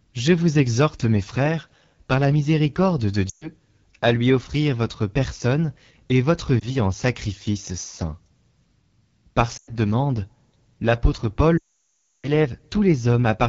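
From start to finish the speech sounds rough and raspy, with a thin, hissy edge above the voice. This is the AMR wideband (HD Voice) codec at what sounds like one of its lowest rates, around 8.85 kbit/s, where its vocal tract model leaves the sound coarse.

At 3.29 to 3.49 s the speech fades out briefly, then returns weak. A shorter dip with a warble comes at 6.60 to 6.72 s, another fade at 9.57 to 9.73 s, and at 11.58 to 12.29 s the sound quickly dies to near silence and comes back rough. These are lost AMR speech frames. Corrupted frames are dropped, and the decoder repeats the last good settings at falling gain. The longest gap covers about 660 ms of missing audio.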